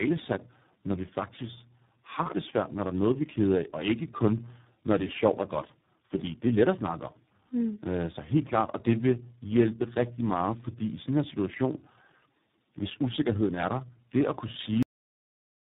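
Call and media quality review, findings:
Tandem speech coding across the whole call: three lossy speech coders in sequence, apparently AMR-NB, G.726 and iLBC joined by G.711 hops. Each re-encodes the previous coder's errors, so speech comes out rough, muffled and warbly, with nothing above 3.8 kHz.

Cut-off end at 14.83 s: the final buffers were never written or played out. Speech stops mid-sound and drops straight to digital silence, with no decay, through to the end of the file.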